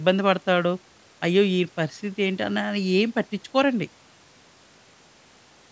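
No technical faults can be heard in this speech, which has passed through a call's microphone processing with nothing above 8 kHz.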